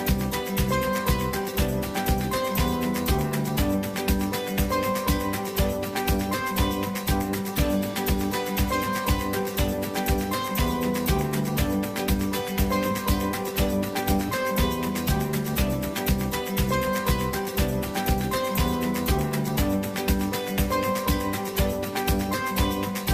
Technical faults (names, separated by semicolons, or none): none